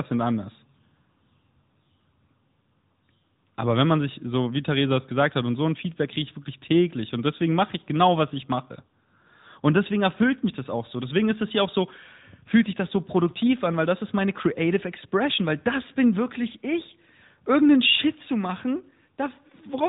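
A speech recording carries AMR narrowband mobile codec damage from start to finish. Nothing above 4 kHz survives, so the voice sounds boxed in, like a phone call. The codec rebuilds speech from a vocal tract model fed by a few pulses per 5 ms subframe. That leaves a plainly audible synthetic, buzzy edge. The degree of coarseness fits AMR-NB at about 10.2 kbps, one of its higher bit rates.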